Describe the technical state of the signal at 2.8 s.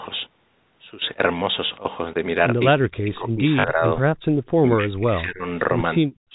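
At 2.8 s the speech is being pulled down by speech suppressed in double talk, running from 2.77 s to 3.84 s. Across that stretch the level dips hard, by roughly 40 dB at its deepest, so the talker fades and breaks up for about a second. The likely cause is an echo canceller that, with both sides talking at once, could not tell the near talker from loudspeaker echo and attenuated everything.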